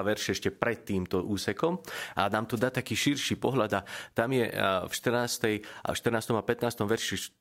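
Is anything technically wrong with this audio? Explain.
Yes, there's one glitch worth flagging. At 2.55 to 2.61 s the speech gets a wireless microphone noise hit, a quick swish of static lasting about 65 ms. What's going on is the FM radio link from the mic briefly fading as reflected copies of the signal cancel the direct one, so the receiver's own noise surges up before the signal recovers.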